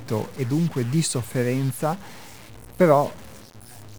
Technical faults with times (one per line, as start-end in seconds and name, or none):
0.00-3.99 stuck bit